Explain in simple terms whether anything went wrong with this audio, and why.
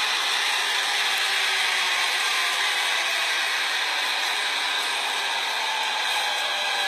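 Throughout the clip, the treble sounds gritty and metallic, bright but not natural. The likely cause is HE-AAC compression, which stores only the lower frequencies and fills in the highs by copying lower bands upward, so the rebuilt top end doesn't match the original.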